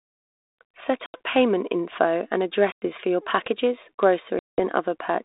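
Hard-edged silent holes cut the speech at 1.06, 2.72 and 4.39 s, lasting 80, 100 and 190 ms. Each ends in a slightly distorted return. This is packet loss on an ADPCM call. Silence replaces the lost packets, desynchronising the decoder's predictor and step size.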